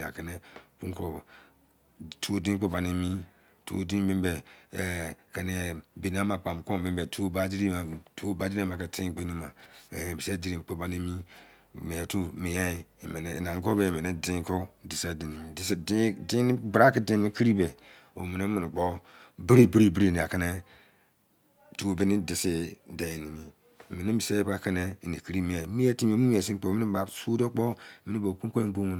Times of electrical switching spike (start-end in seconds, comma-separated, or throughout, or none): none